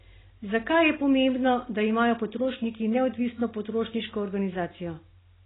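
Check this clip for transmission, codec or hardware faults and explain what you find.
Heavy codec damage runs through the whole speech clip, most likely from AAC compression at a very low rate. Nothing reaches above 3.9 kHz, which fits AAC-LC squeezed to around 16 kbps: the encoder drops the upper band entirely and coarsely quantises what remains, leaving gaps and warbling. The speech sounds dull and muffled, with a swirly, fizzy edge on sibilants and held vowels. A spectrogram shows a hard ceiling at 3.9 kHz and patchy, blotchy energy below it.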